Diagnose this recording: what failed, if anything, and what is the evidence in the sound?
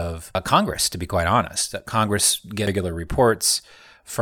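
The codec stage failed, with damaged data in the compressed stream. Brief blips cut through the speech at 0.35 s and 2.67 s. At each point the decoder hit corrupted bytes. It misread those frames, lost sync and resynchronised at the next valid frame header.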